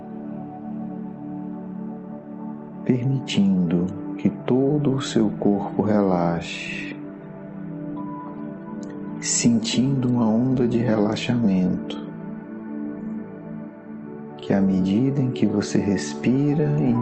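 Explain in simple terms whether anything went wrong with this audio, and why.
Nothing went wrong with this audio; it simply sounds the way sound normally does after travelling over an ordinary internet call.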